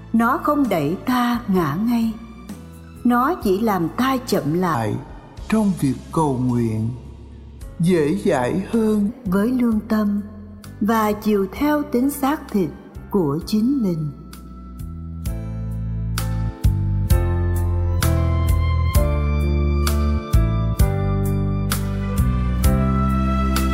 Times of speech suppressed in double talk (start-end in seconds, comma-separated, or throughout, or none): none